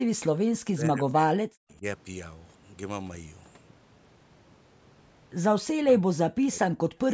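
Speech from a call, with the voice repeatedly dropping out. It dips by roughly 40 dB at 0.04 to 0.09 s, 0.52 to 1.83 s, 5.81 to 6.8 s and 7.05 to 7.14 s. This is likely speech suppressed in double talk. The echo canceller mistook the talker for far-end echo and turned the voice down. The band stops at 8 kHz, as the call's microphone path shapes it.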